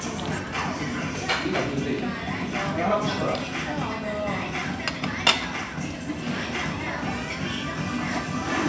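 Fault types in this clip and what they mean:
No faults can be heard anywhere in this audio.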